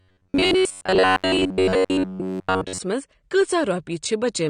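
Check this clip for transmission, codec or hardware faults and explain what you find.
Two faults are present: a robotic buzz over the first part of the clip and low-bitrate codec damage throughout.

From 0.01 s to 2.80 s the speech takes on a robotic sound from repeated short buffers. The likely cause is new audio reaching the playback side too slowly, with the gaps filled by replaying one short buffer again and again while most of the real signal is skipped. Each repeat lasts about 10.7 ms, so the repetition imposes a fixed, metallic buzz at 93.8 Hz that roughly tracks the speech.

Across the whole clip there is audible AAC compression, likely AAC-LC at a low rate in the region of 32 kbps. To save bits the encoder has lowered its cut-off and quantised the remaining bands coarsely, so the speech sounds dull and muffled, with a smeared, warbling texture on sustained sounds and sibilants.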